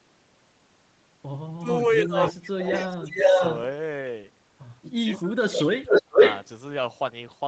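Speech dips and breaks up in two stretches, from 1.6 to 3.29 s and from 5.04 to 6.19 s. Parts of it fall away by roughly 30 dB in the first and 35 dB in the second, for around a second and 0.7 s in total. This is likely speech suppressed in double talk: while both sides spoke at once, an echo canceller could not tell this talker from loudspeaker echo and turned everything down. A delayed copy of the voice, trailing it by 468 ms, also comes through at 2.21 to 2.33 s and 2.66 to 3.6 s, and again at 5.12 to 5.22 s and 5.59 to 6.47 s. This echo leak ranges from far below the speech to roughly 10 dB above it, and is likely the result of a loudspeaker setup on one side whose echo canceller let part of its microphone pickup slip back into the call.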